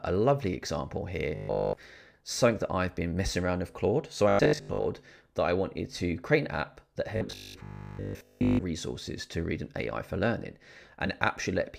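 The audio has robotic sound from repeated short buffers at 1.35 to 1.77 s, 4.29 to 4.89 s and 7.17 to 8.61 s: a rigid 50 Hz buzz, likely from a 20 ms buffer being replayed while fresh audio lagged. All of the first stretch is repeated, and most of the later two.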